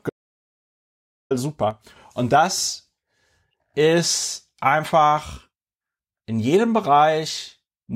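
At 0.10 s the speech cuts out into an audio dropout to silence. It lasts until 1.31 s, about 1.21 s in all. The gap is silent. No room tone or hiss remains underneath. The sound stops abruptly and resumes abruptly. Whatever was spoken in that stretch is lost. The likely cause is a brief loss of the input signal, such as a disconnected device, a failed link or a stray mute, while the recording carried on writing silence.

From 1.71 s to 1.96 s there is a sudden gain jump. The level drops by about 6 dB at once and then returns. Speech and background noise fall and rise together. The edges are hard, with no fade. This is likely a digital gain change applied between one sample and the next without a ramp. A 6 dB step matches halving the signal.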